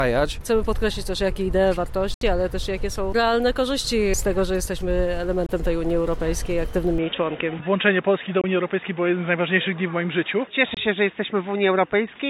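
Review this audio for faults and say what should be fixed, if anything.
Four short holes cut through the sound, at 2.14–2.21 s, 5.46–5.49 s, 8.41–8.44 s and 10.74–10.77 s. The first loses about 70 ms. The other three lose about 23 ms each. Each gap starts and ends abruptly or with a fade of a few milliseconds. The sound then resumes as if it had kept playing. This is most likely a Bluetooth dropout: packets missed their deadline and were discarded. The gap lengths fit one to three lost packets. Keep the headphones close and away from Wi-Fi and other 2.4 GHz interference.

At 6.98 s the tone changes abruptly and stays changed to the end. Nothing above 3.8 kHz survives, so the sound turns dull and boxy. There is no silence at the change. The level stays about the same. A faint new noise floor appears, roughly 50 dB below the signal. This points to the input switched to a poorer device, likely a headset's call profile or another microphone taking over mid-recording. 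Lock the input device in the system settings before recording.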